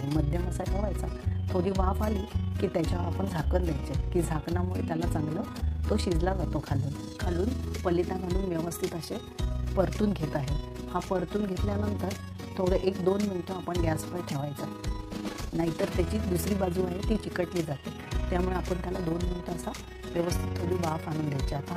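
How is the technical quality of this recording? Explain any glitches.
The recording is marred by a steady, rough flutter that runs through the entire clip. The level pulses up and down by about 6 dB around 30 times a second, giving a fast, rough tremolo. This is overlap-add ripple: the audio was processed in windowed frames and reassembled with overlaps whose gains don't add up evenly, so loudness dips and swells once per frame.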